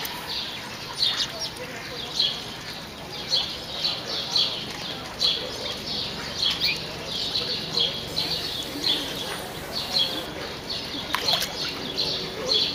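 From 8.08 to 10.26 s, the signal is reduced to a low bit depth with dither, sounding like only about 7 bits. Dither is added before rounding, so the rounding error becomes random rather than tracking the waveform, and it spreads into broadband white noise. For those two seconds an even, constant hiss sits only around 15 dB below the signal, loud enough to cloud it, yet without any harsh or grainy distortion.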